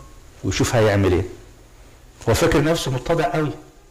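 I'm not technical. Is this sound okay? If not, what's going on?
No. From about 2.62 s until the end, one of the two stereo channels runs roughly 5 milliseconds behind the other, and the two are then mixed together. This fault is called channel delay, or comb filtering. Because of the slight mismatch, parts of the sound cancel each other at evenly spaced pitches, starting low around 100 Hz. The result is a hollow, phasey tone over that final stretch.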